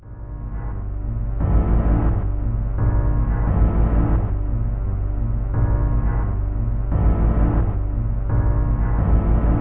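From start to finish, every sound is dragged down to roughly a third of its proper speed and sits about 17.6 semitones lower, well over an octave, so events smear into slow, murky, growling shapes. This is a wrong sample rate fault: the samples play back at 0.363 times their intended pace with no conversion, which fits audio recorded at 44.1 kHz being played at 16 kHz, so pitch and tempo both fall by the same ratio.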